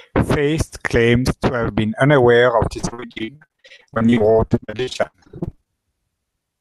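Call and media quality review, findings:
Repeated packet loss (robotic sound), 2.79–5.69 s, right after "have been unaware of": jitter buffer/network dropping packets in rapid succession, dozens of gaps up to 72 ms, concealment extending prior audio. Result: choppy, robotic speech, roughly half the stretch synthesized, pieces missing.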